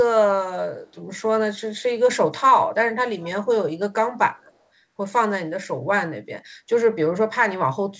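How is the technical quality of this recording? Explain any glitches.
The recording has two brief glitches: an echo leak at 1.77 to 1.82 s and again at 3.21 to 3.28 s. The likely cause is a far end playing the call on a loudspeaker, where the echo canceller did not fully remove what its microphone picked up from the loudspeaker, so part of it went back down the line. Each glitch is a short, faint copy of the speech arriving about 119 ms late. The first is very faint, around 40 dB below the speech, and the second is more noticeable at roughly 25 dB down. The whole clip stops at 8 kHz, which fits a wideband call codec such as G.722.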